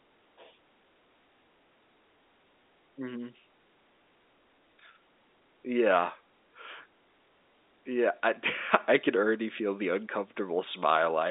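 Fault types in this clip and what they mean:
No faults are audible in this clip.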